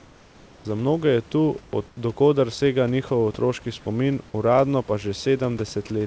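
From 0.00 to 0.65 s and again from 1.88 to 1.97 s, just before "koder sega njihov otroški", comfort noise replaces the background: the room's textured hiss gives way to a flat, featureless wash about 4 to 5 dB quieter, likely from discontinuous transmission. On a spectrogram these stretches show smooth, uniform grey without fine detail.

At 5.87 to 5.90 s, sound dropped by the voice detector cuts about 20 ms of sound, which is likely mistaken for silence. Steady synthetic noise fills the 30 ms gap, and the waveform shows a brief flat-envelope patch where the sound ends abruptly.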